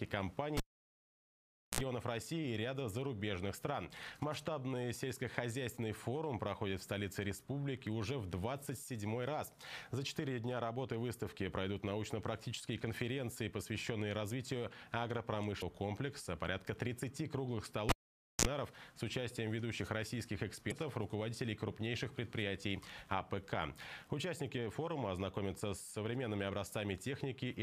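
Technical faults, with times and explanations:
0.57–1.81 s, cable pulled and plugged in: a pop, about 1.18 s of near silence, a brief 60 Hz mains buzz lasting about 56 ms as the plug tip touches, then another pop.
15.58–15.62 s, damaged data in a compressed stream: a short blip. Corrupt bytes make the decoder lose sync and skip ahead to the next frame header.
17.89–18.45 s, cable pulled and plugged in: pop, about 0.51 s of near silence, roughly 34 ms of 60 Hz buzz while only the tip touches, then a pop as sound returns.
20.68–20.72 s, damaged data in a compressed stream: another brief blip. The decoder misreads damaged frames, loses sync and searches for the next frame header.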